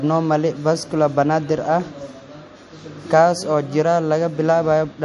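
MP3 compression damage runs throughout this speech recording, with nothing above 11.3 kHz and plainly audible watery swirl. The likely cause is an encoder starved of bits, consistent with roughly 48 kbps, cutting the treble and dropping weak frequency lines frame by frame.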